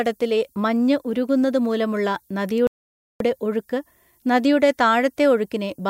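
From start to finish, low bit depth with noise shaping leaves a thin, steady hiss rising toward the top of the band, from 10-bit quantisation with error pushed upward, roughly 35 dB below the speech. At 2.67 s, after "മഞ്ഞ് ഉരുകുന്നത് മൂലമുള്ള", a rebuffering stall cuts to silence until 3.20 s, then resumes intact at "ഒഴുക്ക് നദിയുടെ", adding 0.53 s.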